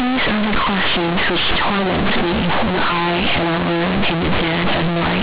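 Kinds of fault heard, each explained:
Companded audio read as linear: The speech was stored as mu-law but is played back as plain linear 8-bit samples, with no expansion step. Every change of sign throws the output across about half its range. Quiet passages come out as large as loud ones, and the waveform is badly bent out of shape. This lasts the whole clip. It sounds very loud and buzzy, with strong noise filling every pause.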